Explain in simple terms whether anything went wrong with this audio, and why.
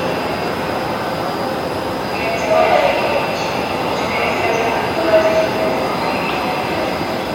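Nothing went wrong here.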